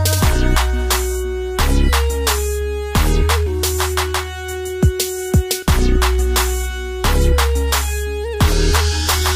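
Nothing goes wrong technically anywhere in the clip, so there's nothing here to flag.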